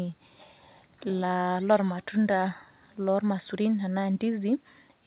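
Nothing stood out on listening to this speech clip, which comes through a narrowband call path with no content above 4 kHz.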